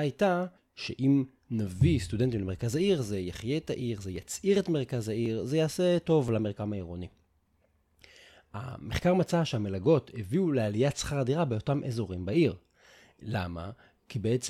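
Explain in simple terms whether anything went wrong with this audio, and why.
Nothing went wrong here.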